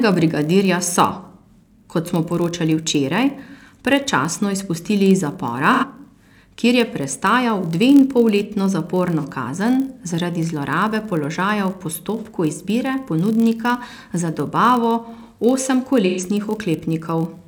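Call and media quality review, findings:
Block size mismatch (padded), throughout: upstream stage writes blocks slightly short of what the next stage reads, consistent with a 1024-sample read, remainder zero-filled. Tiny gap per block gives a steady 43.1 Hz buzz; playback only 0.999x speed, timbre unchanged.

AAC frame loss with concealment at 1.21 s, 5.73 s (after "predčasno izpustili iz"), 9.18 s, 12.17 s, 16.05 s: decoder patching dropped frames from last good spectrum. Gaps of about 43, 85, 43, 43 and 128 ms, heard as smeared, noisy, phasey patches.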